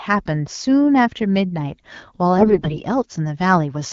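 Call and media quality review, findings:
AMR bit errors, 2.37–2.83 s: speech turns hoarse, scratchy and gargly while pitch and level hold. The errors land in the less protected bits of AMR-WB frames, roughly one bit in five. Misplaced excitation pulses and skewed gain and spectral values cause the roughness. Spectrogram: smeared, noisy formants and broken harmonic striations over 22 20 ms frames. Waveform: envelope intact but jagged. The underlying codec sounds consistent with 12.65 kbit/s HD Voice.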